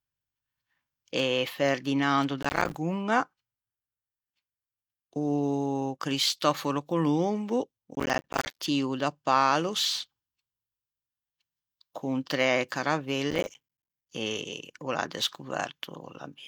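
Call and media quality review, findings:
Processor overload crackle, 2.42–2.75 s, 7.95–8.59 s, 13.3–14.1 s. Gritty crackle riding on the speech in each burst, clearing once the load drops. Probable component: audio processing thread on the capture or playback host. Mechanism: CPU too busy to fill very short buffers, around 5 ms each, on time; dozens of deadlines missed in quick succession, each leaving a hard-edged gap of silence.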